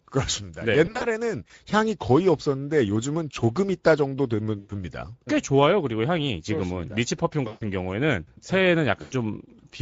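Throughout this speech recording the audio has a plainly audible noisy, hoarse coding texture, the sound of the Speex codec. Its CELP model gets too few bits to describe the excitation, which points to a rate around 16.8 kbps. At 0.85 to 1.05 s, 4.59 to 4.72 s, 7.47 to 7.63 s and 9.01 to 9.14 s the audio smears into a buzzy tone or coloured noise that fades, then takes a moment to recover. This is VoIP packet loss concealed by the speech codec. The decoder extrapolated from its last pitch and filter with falling gain to cover about 100 ms of missing audio at the first, second and fourth spots and about 140 ms at the third. At the first spot the gaps are scattered over about 160 ms, none longer than 40 ms.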